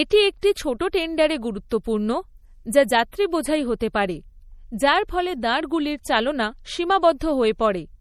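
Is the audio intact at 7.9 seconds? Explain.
No. At 7.9 s the speech carries the same plainly audible damage heard throughout the clip, most likely from MP3 compression at a low bitrate that fits a 48 kbps stream. With so few bits, the encoder drops weak frequency lines, which switch on and off from frame to frame. The result is a watery, swirling texture with metallic chirps on s sounds and smeared consonant onsets. A simple low-pass filter would only dull the sound, with no swirling.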